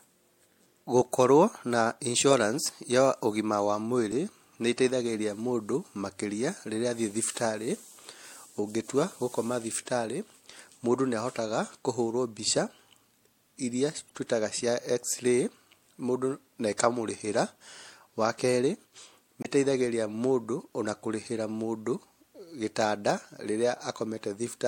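At 4.11 s, between "insurance ya ũgima wa" and "nĩĩteithagĩrĩria mũndũ makĩria rĩrĩa", damaged data in the compressed stream gives a brief glitch. The decoder misreads corrupted frames and loses sync. It recurs from 14.08 to 14.11 s, before "twĩtaga cia", and from 19.40 to 19.46 s.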